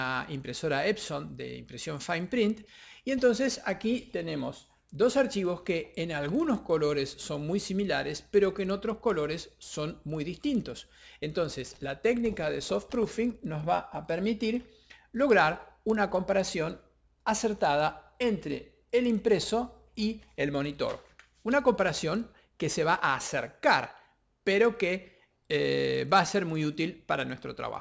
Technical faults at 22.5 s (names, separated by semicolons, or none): resampler restarted on every block